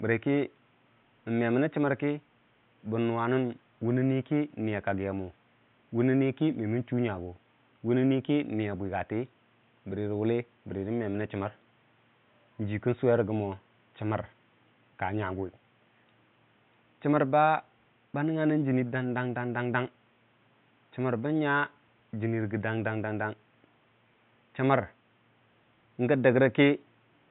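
No technical faults are present.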